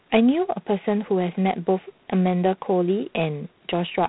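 From start to finish the speech carries G.726 ADPCM coding damage. Coarse sample-difference quantisation adds a harsh, rasping hiss that rises and falls with the speech level, which fits the 24 kbit/s rate. A spectrogram shows a hard ceiling at 3.9 kHz and grainy noise filling the speech bands.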